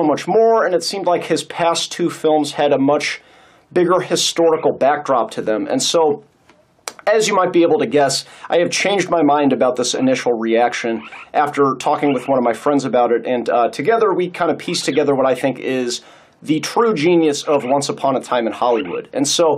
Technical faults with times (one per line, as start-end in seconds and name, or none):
none